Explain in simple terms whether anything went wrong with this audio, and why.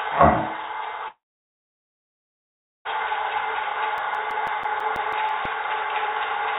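At 1.08 s the sound cuts out. A brief fading hiss carries over, then near-silence until 2.87 s, when the audio resumes with that stretch missing. This points to a long network dropout: the packets likely never arrived, so the receiver filled the gap.

From 3.98 s to 5.45 s there are about ten quick ticks, roughly seven per second, each a tiny fraction of a second long. These are CD scratch ticks: a blemish hit once per disc turn, and the player patched or muted the damaged spots.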